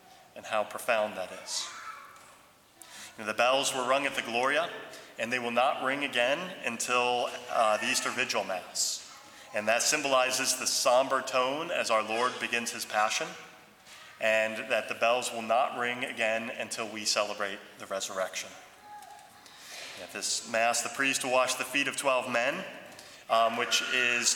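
No technical faults can be heard anywhere in this recording.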